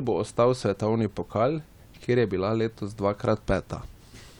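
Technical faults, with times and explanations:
No technical faults are audible.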